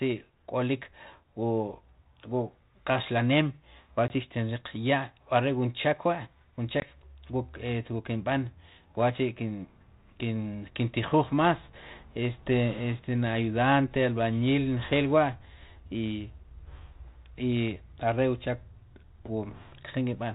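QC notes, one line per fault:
4.08 s and 6.80 s, packet loss on an ADPCM call: each gap is about a single packet of 20 ms, a hard-edged silence. The G.726 decoder's predictor and step size drift from the sender's, so the speech returns slightly distorted until about 4.11 s and 6.85 s.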